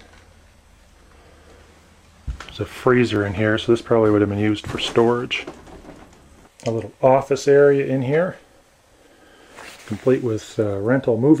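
At 3.15 s and again at 7.38 s there's a repeated buffer: fresh audio didn't show up in time, so the device replayed the chunk it had just played, once over. The repeated piece is tiny, which fits a 10 ms buffer, so instead of an obvious stutter you get a quick click with a hard edge at the join. Each one also drops about a hundredth of a second of audio.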